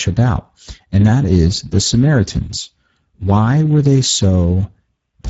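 Speex codec damage runs throughout: starved CELP excitation leaves the speech hoarse and noisy, with nothing above 7.7 kHz, which fits a bitrate near 10 kbps.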